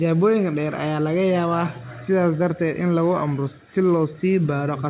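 No faults are audible in this speech clip; the call path shows only its expected band limit, with nothing above 4 kHz, which fits a 64 kbps G.711 mu-law codec.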